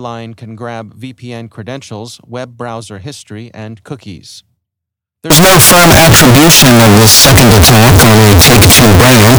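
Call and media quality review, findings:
Signed and unsigned mixed up, likely at the 16-bit sample conversion: top bit flipped from 5.30 s to end; zero crossings jump full-scale, giving loud, harsh distortion and no quiet passages.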